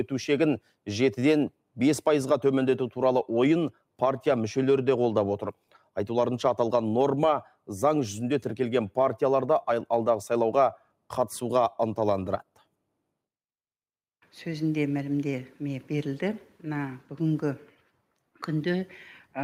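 Between 5.55 and 5.89 s the noise suppressor misjudges part of the signal as background noise and applies gain reduction to it, producing sound cut by the noise suppressor. The level sinks by as much as about 12 dB, and in total around 150 ms within that span is pulled down. Steady and decaying portions lose the most, so tails shorten and sustained sound thins out, while sharp onsets pass through largely intact.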